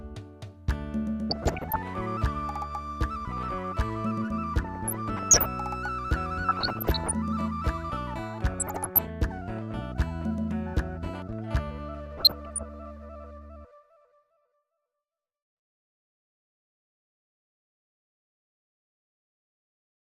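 DAB burbling occurs five times: 1.30 to 1.76 s, 4.64 to 5.46 s, 6.48 to 7.13 s, 8.48 to 9.08 s and 12.17 to 12.63 s. Weak reception let bit errors, at a rate somewhere under one percent, slip past the error correction into the MP2 audio data. The corrupted sub-band samples put brief blips of noise into individual frequency bands, giving each stretch a watery, bubbling texture.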